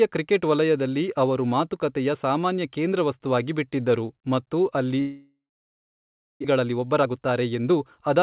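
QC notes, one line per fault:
5.0 to 6.46 s, long network dropout: just after "ಕೇಂದ್ರವಸ್ತುವಾಗಿ ಬಿಟ್ಟಿದ್ದರು ಮತ್ತು ಅಲ್ಲಿ" the sound is extended as a fading buzz, then about 1.0 s of silence before speech resumes with a stretch missing, likely from packets failing to arrive for about 1.4 s; delay grows by roughly 0.4 s.
6.64 to 8.16 s, jitter buffer speed-up: speech runs about 12% fast at unchanged pitch and sounds hurried, because the receiver trims short pitch-period segments repeatedly, roughly 0.2 s in total, to shed extra buffered delay, over a band cut off at 4 kHz.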